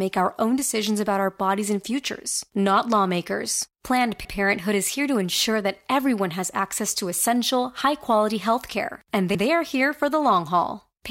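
The audio was handled in chunks of about 5 seconds, and each new chunk began before the previous one had finished, so the joins overlap: these are overlapping chunks. At each join, 100 ms of material plays twice, first from 4.25 to 4.35 s and again from 9.35 to 9.45 s. Each seam is heard as a brief stutter or click, and the two recur at a regular 5.1-second spacing.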